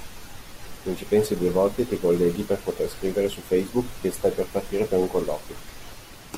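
Nothing stood out as a technical fault on listening to this speech recording.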